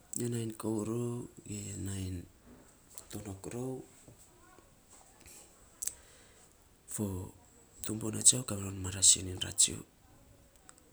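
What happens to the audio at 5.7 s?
Nothing goes wrong at 5.7 s; the speech there carries on cleanly, with no dropout, click, glitch or other fault at that moment.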